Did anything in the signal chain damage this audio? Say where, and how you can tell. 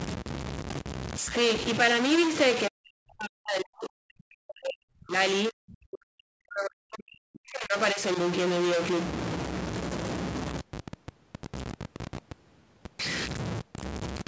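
Yes. A stuck bit runs through the whole clip, most likely at the converter or on a broken data line. The speech carries distortion, and the pauses fill with noise instead of going quiet. A data bit held at a fixed value shifts about half of all samples by its weight and flips with the sign of small values.

Speech suppressed in double talk occurs from 2.68 to 5.17 s and from 5.49 to 8.01 s, likely in the call processing's echo canceller. In both stretches the voice drops by as much as roughly 40 dB. This happens when the canceller cannot tell the local talker from the loudspeaker echo and turns both down. The band ends at 8 kHz, which matches the call microphone path.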